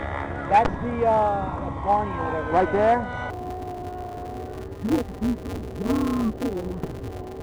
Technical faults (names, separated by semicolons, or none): interleaved audio read as planar